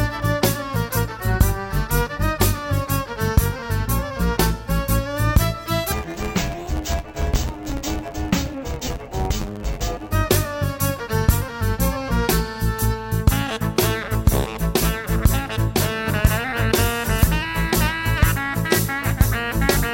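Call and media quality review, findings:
Interleaved audio read as planar, 5.92–10.13 s: dull, robotic buzz at about 92 Hz from 10.88 ms blocks; unlike a pitch shift, pace stays correct and there is no clear octave drop.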